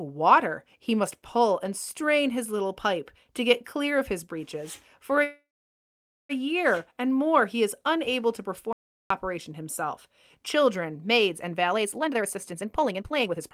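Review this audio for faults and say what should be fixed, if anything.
At 5.23 s the speech stalls in a call audio freeze that runs to 6.32 s. The last sound is carried on briefly as a fading buzz. Then about 0.87 s of near silence follows. The likely cause is packets held up in transit, which left the jitter buffer empty. When the speech resumes, it picks up exactly where it stopped. Nothing is lost. The 1.06 s gap is inserted, and the delay grows by that much. To prevent this, fix the network path causing the late packets or give the jitter buffer more headroom.

From 8.73 s to 9.10 s there is an audio dropout to silence. The speech cuts off mid-flow and returns mid-flow. The gap is silent, with no room tone at all. About 376 ms of speech is simply gone. The likely cause is a brief loss of the input, such as a loose connection, a failed link or a stray mute. The recorder kept writing silence. 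To prevent it, secure the input connection and check mute handling.

From 11.71 s to the end, at 13.54 s, there is a jitter buffer speed-up. Short slices of a pitch period or so are cut out, over and over. The pitch stays the same, but the speech runs at about 151% of normal speed. It sounds rushed. Roughly a second of audio is removed here. This happens when delayed packets arrive in a burst and the receiver drains the excess backlog. To prevent it, let the buffer shrink more gradually and stabilise packet delivery.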